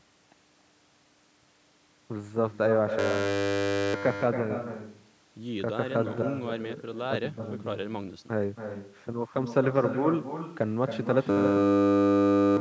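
Echo with no canceller runs through the whole speech clip. Every phrase returns about a third of a second later, about 7 dB quieter and thin.

From 2.99 to 3.94 s, a system hang loop replaces the speech. The hardware repeats one 10 ms buffer, producing a steady 100 Hz buzz. About a second of audio is lost. A second hang loop runs from 11.3 to 12.57 s, with the same 10 ms buzz at 100 Hz. It wipes out roughly one and a half seconds.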